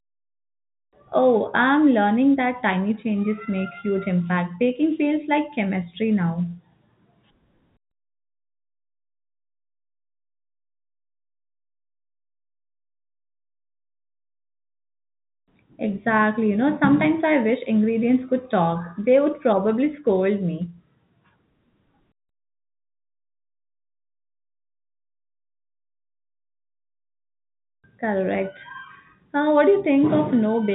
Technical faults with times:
none

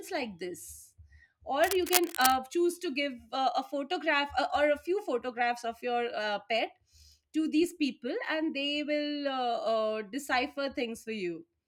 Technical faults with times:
1.64-2.36 cable scratch noise

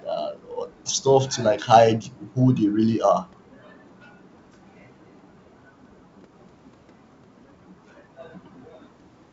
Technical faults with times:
none

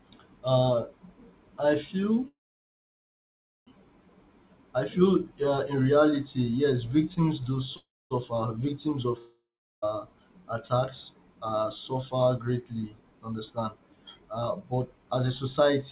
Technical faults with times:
2.28-3.69 call audio freeze
7.77-8.13 call audio freeze
9.19-9.84 long network dropout
13.31-15.70 jitter buffer speed-up

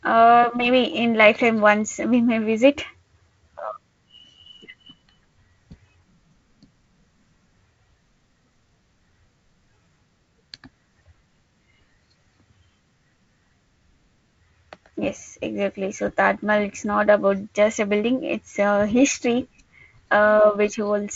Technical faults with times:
none

